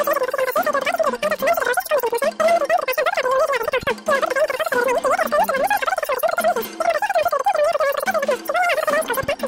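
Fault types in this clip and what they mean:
Wrong sample rate: The audio is played at three times its proper speed with the pitch raised by 19 semitones, which points to 16 kHz material played back at 48 kHz. Unlike a pitch shift or time-stretch, speed and pitch rise together throughout.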